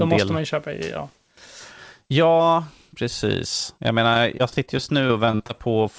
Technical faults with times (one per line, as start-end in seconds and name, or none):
4.14-5.51 repeated packet loss (robotic sound)